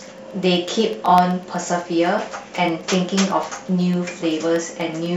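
Speech carries evenly spaced ticks every 0.125 s from 0.06 to 5.06 s, periodic USB or driver dropouts briefly silencing a fraction of a millisecond each time.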